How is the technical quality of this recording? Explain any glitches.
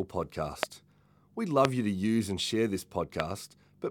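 Three loud pops break into the speech, each a single sharp click lasting about 20 ms, at 0.63–0.65 s, 1.65–1.67 s (just before "you to use and"), and 3.20–3.22 s (right after "use and share this"). They jump roughly 20 to 25 dB above the speech, which carries on beneath them. The likely cause is a brief voltage spike, perhaps from a switch, static or a driver glitch, added to the signal and shaped into a short click by the circuits downstream.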